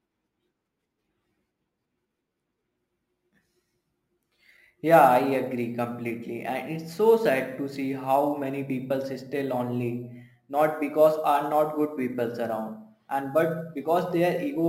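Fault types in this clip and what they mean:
Crude rate conversion: present throughout, heard as a gritty, inharmonic fizz riding on the speech. The sample rate was changed by repeating the nearest existing sample instead of filtering, which fits a step from 32 kHz up to 44.1 kHz. Because those two rates do not divide evenly, the repeats fall in an irregular cycle, creating tones unrelated to the speech. The error sits roughly 30 dB below the signal and grows most audible on loud and bright sounds.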